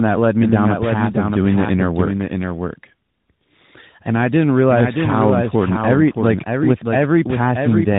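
Throughout the clip, a doubled audio track runs under the speech. A second full-band copy trails about 0.7 seconds behind, roughly 5 dB quieter, with no decay or room colour, likely from a second, slower capture path. The waveform shows each burst repeated as a smaller twin, and the spectrogram shows every pattern duplicated and shifted in time.

Across the whole clip, tandem speech coding leaves the speech rough, muffled and warbly. Each codec in the chain re-coded the previous one's degraded output, and the sound points to three speech coders ending in AMR-NB. The spectrogram is empty above 3.8 kHz, with smeared, blotchy harmonics.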